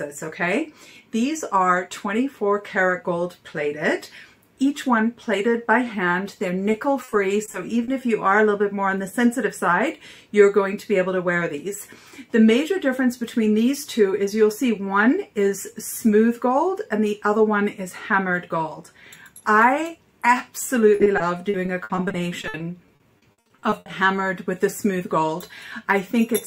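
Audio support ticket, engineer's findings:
Repeated packet loss (robotic sound), 6.72–7.90 s. Choppy texture from about six short holes, none longer than 40 ms, each papered over by repeating the last sound. Spectrogram: smeared, stretched frames. Concealed share about 14%.

Repeated packet loss, 20.96–23.88 s. Worse: roughly twenty gaps up to 60 ms, about a quarter of the span concealed. Waveform shows periodic repeated segments. Probable component: network jitter buffer and concealment.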